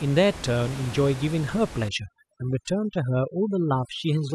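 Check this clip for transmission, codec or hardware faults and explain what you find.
One fault stands out: overdone noise removal, from 1.89 s to the end of the clip at 4.34 s. There the gaps between sounds drop to near silence dotted with twinkling specks, replacing the room noise heard earlier at about 15 dB below the speech. A noise reduction stage set too aggressively is cutting individual frequency bands whenever they sit close to its noise estimate, and the quieter parts of the speech are removed along with the background noise.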